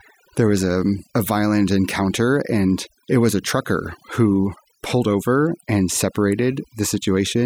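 It's a speech clip with overdone noise removal running the whole way through. The denoiser's been pushed so hard that bands sitting near its noise estimate get pulled right down, so the gaps go almost dead apart from little twinkly specks, and quiet parts of the voice go down with them.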